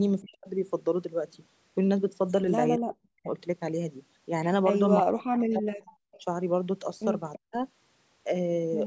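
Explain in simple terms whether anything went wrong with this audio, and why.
Two separate faults affect this call recording.

The first is speech suppressed in double talk. At 0.22 to 0.48 s, 2.79 to 3.28 s, 5.02 to 5.9 s and 7.39 to 7.54 s, the speech drops sharply or almost vanishes for a moment, and at 6.19 to 6.26 s it dips only slightly. This is likely because both people were talking at once, and the call's echo cancelling turned the speaker down along with the echo it was trying to remove.

The second is echo leak. At 5.87 to 5.96 s, 6.12 to 6.22 s and 7.33 to 7.39 s, faint, brief scraps of sound arrive about a third of a second late, sitting well below the main speech. These are likely pieces of sound picked up from a loudspeaker at one end that the echo cancelling failed to remove completely, so they were sent back down the line.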